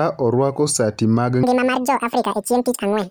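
From 1.43 s to the end, the speech jumps an octave higher at double speed: audio read two samples at a time, frames misparsed as pairs.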